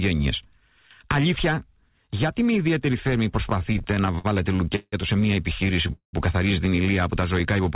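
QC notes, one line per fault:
3.5 to 4.94 s, repeated stalls (stutter): the sound keeps catching and dragging through this stretch, with 13 short holds, the longest about 167 ms, adding up to 363 ms or roughly a quarter of the span. Packets were reaching the receiver more slowly than they were played, so the jitter buffer drained over and over and the last sound was stretched to cover each wait. Nothing is lost; the material is simply pulled out in time.
5.93 to 6.15 s, call audio freeze: the sound halts for about 204 ms, with the final fragment carried on briefly before fading to silence for about 110 ms, then resuming exactly where it stopped. This is likely a packet hold-up on the network that emptied the jitter buffer and shifted playback delay by 204 ms. The receiver concealed the wait rather than skipping, so no audio is missing. The gap plays through the band-limited G.711 call sound, which carries nothing above 4 kHz.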